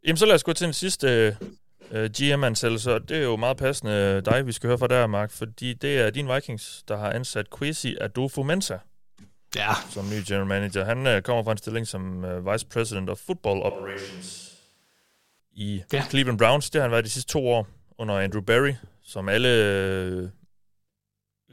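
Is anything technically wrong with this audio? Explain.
Yes. From 13.70 s to 15.40 s, starting just before "i ja", the speech abruptly turns roomy and hollow, drops by about 5 dB, loses low end, and sits over a room noise floor only about 30 dB below it, before snapping back to the close, full sound. This is a switch to a distant microphone. The close microphone's signal was likely lost there, leaving a pickup further away that captures more reflections and noise and less bass.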